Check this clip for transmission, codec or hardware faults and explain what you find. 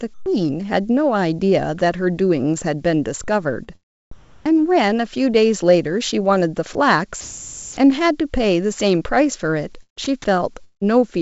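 Several call-transmission faults are audible, all on a speech recording carried over a wideband call path with nothing above 8 kHz, which fits a G.722-style codec.

Comfort noise in place of the background (0.14–0.26 s, 3.64–4.55 s, 6.73–7.77 s): the real background becomes a flat, featureless hiss, about 21 dB quieter in the first instance. This is likely discontinuous transmission, with the receiver synthesising noise during pauses.

Short concealed packet loss (3.64–3.69 s): a brief smear where about 40 ms of audio went missing and was bridged by extending the preceding sound before blending back.

Sound dropped by the voice detector (6.73 s): a tiny sliver of sound vanishes into steady noise. The likely cause is the detector briefly mistaking it for background and halting transmission.

Sound chopped by the voice detector (9.83–10.06 s): the sound turns choppy, with holes where it drops out. 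The likely cause is repeated on-off switching of the detector.

Long network dropout (10.64–10.87 s): the last sound trails off as a fading buzz, then about 100 ms of silence before audio resumes with a stretch missing. This is likely a gap in packet arrival.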